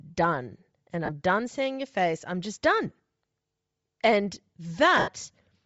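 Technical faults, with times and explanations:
throughout: Bluetooth LC3 compression. The speech has a plainly audible breathy, grainy edge in the upper band, where the codec has zeroed detail and filled it with noise. This steady texture, rather than brief dropouts, likely comes from LC3 at a rate near 32 kbps with 7.5 ms frames.
1.05–1.10 s: lost LE Audio frames. A 30 ms gap, which fits four missing 7.5 ms frames, is covered by the decoder replaying the last spectrum with random signs. This gives a short noisy smear instead of a click or a silent hole.
4.97–5.08 s: lost LE Audio frames. About 90 ms goes missing across a 105 ms stretch, with the longest unbroken loss around 70 ms. The concealment repeats the last spectrum as noise and then fades it, so the sound sinks gradually toward silence rather than cutting off.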